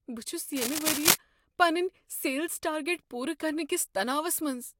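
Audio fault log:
0.53–1.16 s, cable scratch noise: a dense, uneven burst of scratching sits over the speech for about 0.6 s, somewhat louder than the speech itself, ending just before "پنٕنۍ سیلز ٹارگیٹ". The likely cause is a worn cable or connector being moved, its contact resistance jumping rapidly.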